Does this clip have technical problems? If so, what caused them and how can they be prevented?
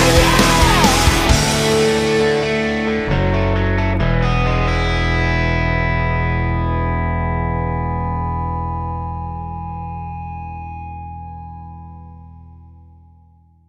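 No, nothing in this clip stood out as a technical problem on listening.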